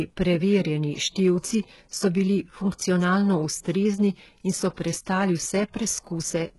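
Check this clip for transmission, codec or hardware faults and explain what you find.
One codec fault runs through the whole speech clip: HE-AAC compression, likely at a very low rate, which fits about 12 kbps. Only the lower spectrum is coded; the treble is rebuilt from copied lower bands and stops at 11.5 kHz. Damage is heavy, and sibilants turn gritty and metallic.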